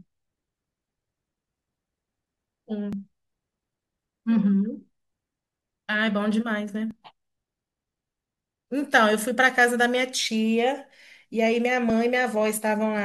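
At 2.93 s and again at 6.91 s the speech jumps ahead, losing roughly 10 ms and then a longer 40 ms or so, likely a dropped buffer (overrun).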